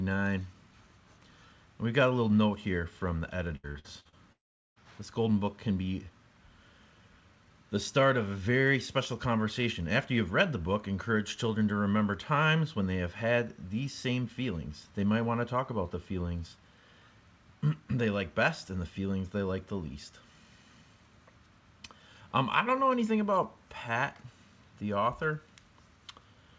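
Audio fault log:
3.56–4.15 s: repeated packet loss (robotic sound). Five short gaps, the longest 74 ms, are filled by repeating prior sound. About 41% turns choppy.
4.32–4.79 s: long network dropout. Sound cuts to a short fading buzz or hiss, then about 380 ms of silence. Likely lost packets. The missing 440 ms never returns.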